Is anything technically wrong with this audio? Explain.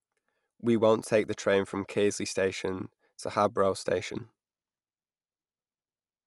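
Yes. Throughout, the speech sounds dull, with nothing above 11.4 kHz and a rough, fluttery noise clinging to tonal parts. The likely cause is low-bitrate Dolby Digital compression, fitting a 64 kbps stream, where the encoder narrowed the band and the decoder filled starved frequency lines with dither noise.

From 0.83 to 1.65 s there are CD scratch ticks. A disc blemish destroyed more data than error correction could rebuild on each revolution, so the player patched or muted the samples. This produces five regular clicks, the longest lasting about 2 ms.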